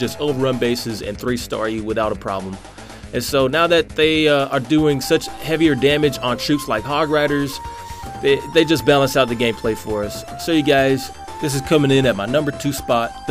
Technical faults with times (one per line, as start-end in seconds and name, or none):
none